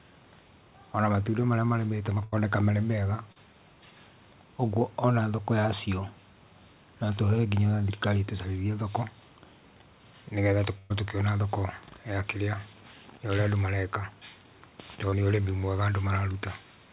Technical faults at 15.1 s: short concealed packet loss

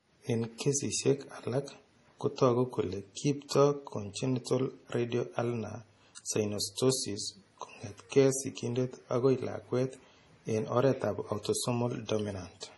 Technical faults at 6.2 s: MP3 compression; pre-echo

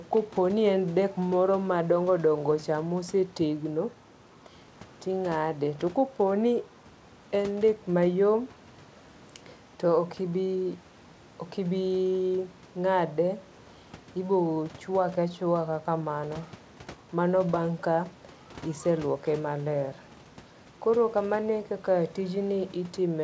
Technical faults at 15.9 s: none

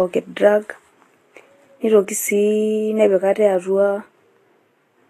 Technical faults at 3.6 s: Vorbis compression

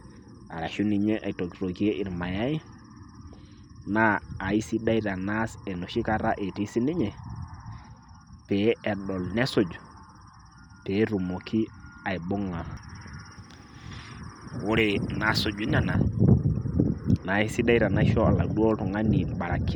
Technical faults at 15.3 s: pre-emphasis left on

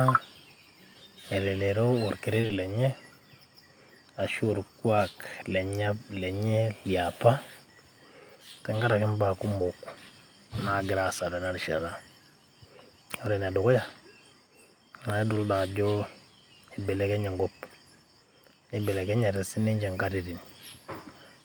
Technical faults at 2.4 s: short concealed packet loss; lost packet rebuilt from error correction

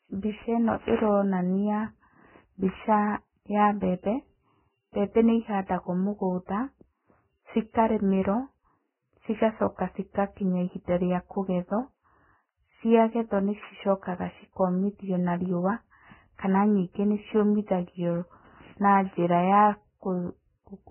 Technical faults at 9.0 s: Vorbis compression

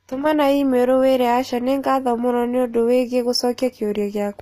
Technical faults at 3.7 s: HE-AAC compression

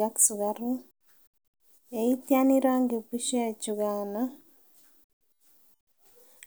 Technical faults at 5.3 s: none

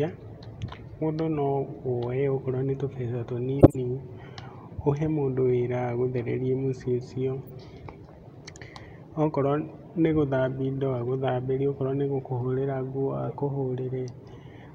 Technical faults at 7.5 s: corrupt frame decoded

